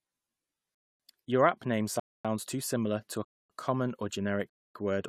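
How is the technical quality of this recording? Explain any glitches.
The speech is cut by a gap between chunks four times: at 0.75–1.00 s, 2.00–2.25 s (after "app name"), 3.25–3.50 s (after "too similar to a"), and 4.50–4.75 s (after "to a common or"). The audio was delivered in 1.0 s pieces with 250 ms of silence inserted at each join, so no speech is lost, but each join is a hard-edged hole at a steady rhythm.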